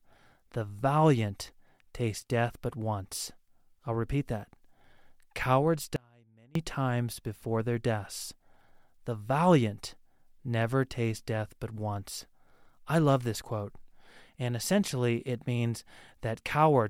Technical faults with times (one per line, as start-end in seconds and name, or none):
5.96-6.55 audio dropout to a faint residue